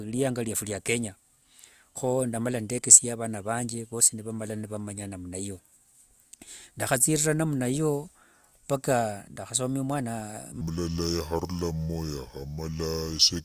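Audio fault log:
10.61–13.44 s, wrong sample rate: the speech suddenly slows to two-thirds speed and drops about 7 semitones, low and dragging. Playback runs slower than recording with no conversion, so pitch and tempo fall together, which fits 48 kHz audio played at 32 kHz.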